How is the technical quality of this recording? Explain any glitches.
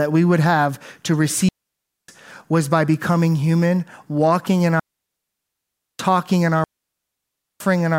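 The recording is marred by three digital wireless dropouts: 1.49–2.08 s (0.6 s), 4.80–5.99 s (1.2 s) and 6.64–7.60 s (0.96 s). Each time the receiver lost too much data and muted with a very fast fade, leaving a clean gap of near silence in the speech with no noise burst on either side.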